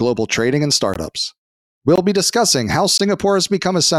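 At 0.94 to 0.96 s, just after "trading and", the speech drops out for 20 ms, a gap between chunks. The same hole returns at 1.96 to 1.98 s, right before "be discussing how", and at 2.98 to 3.00 s, after "be discussing how". The audio was delivered in 1.0 s blocks, and a short stretch of silence sits at each join. Nothing is lost, but the gaps fall at a regular one-second spacing.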